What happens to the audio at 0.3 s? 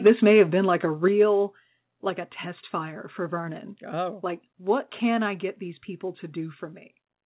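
At 0.3 s the speech has a harsh, crackling, flattened edge. This is microphone overload, running from 0.06 to 0.42 s. The loudest peaks overshoot the converter's ceiling by about 6 dB and have their tops sheared off, so a small share of samples sit pinned at the converter's limit and add gritty distortion. The likely cause is input gain set too high at the microphone. The sound is also band-limited at 4 kHz.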